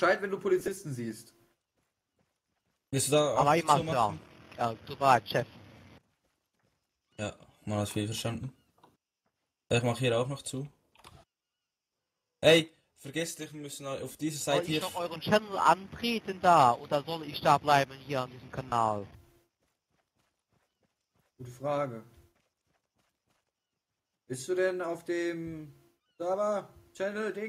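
Lost LE Audio frames at 0.60 s, 14.12 s and 18.69 s: the LC3 decoder fills each 30 to 40 ms of missing audio with the previous spectrum with scrambled signs, so sound briefly smears into noise.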